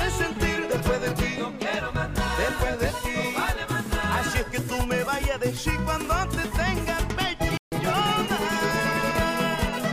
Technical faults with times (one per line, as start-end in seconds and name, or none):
7.57-7.72 playback stall